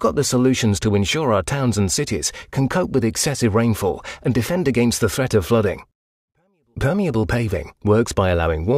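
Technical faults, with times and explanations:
No technical faults can be heard in this clip. Nothing in the audio calls for a time or an explanation.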